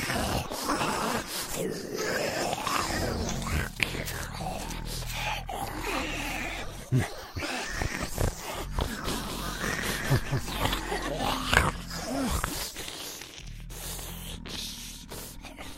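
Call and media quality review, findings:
Doubled audio track, 9.04 to 10.78 s. A second full-band copy trails by about 200 ms, roughly 5 dB quieter. It has no decay or room colour and cuts in and out abruptly. Likely a slower capture path or misaligned edit.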